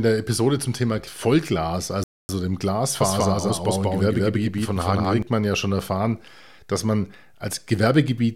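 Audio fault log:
2.04–2.29 s: Bluetooth stall. The speech drops to silence for about 0.25 s and resumes, likely from interference delaying packets so the headphone buffer ran empty.
3.00–5.22 s: doubled audio track. A second full-band copy at roughly the same level trails by about 200 ms, starting and stopping abruptly, likely a slower second capture path.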